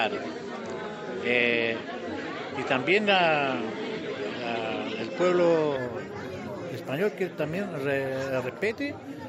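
Input switched to a poorer device, likely, from 0.0 to 5.76 s: nothing above 8.5 kHz, a level about 5 dB different, and a faint new noise floor, before it clears abruptly.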